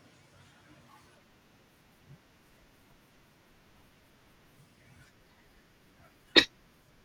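No technical faults can be heard in this recording.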